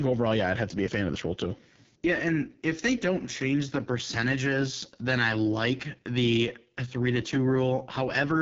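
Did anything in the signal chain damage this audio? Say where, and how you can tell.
Yes. The damage happens at the codec stage: the speech runs through an AMR wideband (HD Voice) codec for its whole length, and the harsh, raspy texture points to one of the lowest rates, roughly 6.6 kbit/s. At that rate the pulse-driven vocal tract model has too few bits to follow the voice, so it comes out rough and gritty. Nothing is present above about 7.2 kHz, and the top band sounds like shaped noise, not real detail.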